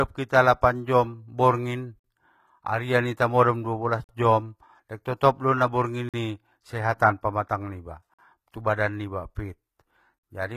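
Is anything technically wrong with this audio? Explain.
Yes, the speech has two faults. Throughout, the treble sounds gritty and metallic, with nothing above about 14.8 kHz, and it is likely HE-AAC compression at a low bitrate, perhaps around 20 kbps. The upper band is rebuilt from copied lower bands rather than coded, so sibilants turn lispy instead of simply dulling as a plain low-pass would.

A gap between chunks, about 48 ms of silence, occurs at 1.99, 4.04, 6.09, 8.14 and 10.19 s, after each 2 s chunk. The silence is inserted at the joins rather than replacing sound, so the speech pauses and then resumes intact. A dropout would instead delete the audio.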